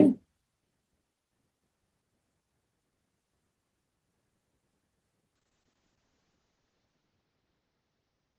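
Speech that suffers a call bitrate drop from 5.36 s to the end: the encoder falls from 32 to 7 kbps, audio band narrows from 20 kHz to 8 kHz, and the coding turns coarse. Unlike a simple low-pass filter, the roughness accompanies the muffling.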